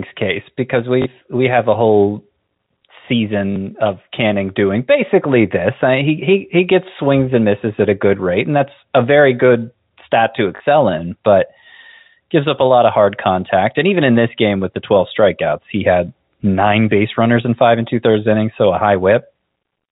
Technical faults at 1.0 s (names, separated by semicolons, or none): packet loss with last packet repeated